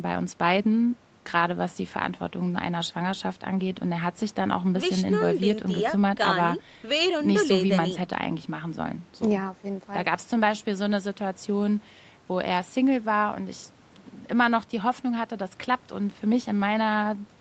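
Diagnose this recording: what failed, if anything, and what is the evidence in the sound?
Nothing has failed: the speech shows the expected marks of a call's microphone processing and codec path, with no content above 8 kHz, as a wideband call setting leaves it, and nothing in the sound points to a problem at any stage.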